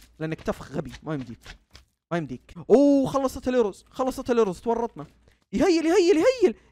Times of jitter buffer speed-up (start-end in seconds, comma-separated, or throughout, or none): none